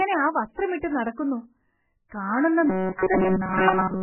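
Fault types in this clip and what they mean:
MP3 compression: An encoder short of bits has likely discarded weak frequency lines, so their energy switches on and off between frames, and it has cut the top of the band. Nothing is left above 3 kHz, so the speech sounds dull and muffled, and the coding damage is heavy throughout, giving a watery, swirling texture with smeared attacks. The low rate fits a stream of around 8 kbps.
robotic sound from repeated short buffers: From 2.70 s to the end, new audio likely arrived too seldom, so the software filled the gaps by looping the most recent short slice while the real signal was skipped. The loops impose a steady 188 Hz buzz, which matches slices of about 5.3 ms. That buzz covers essentially the whole stretch, turning the speech into a rigid, metallic drone that tracks the original only loosely.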